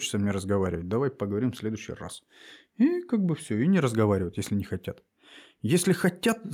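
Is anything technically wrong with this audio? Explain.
No, there's nothing technically wrong here, and the recording holds up fine all the way.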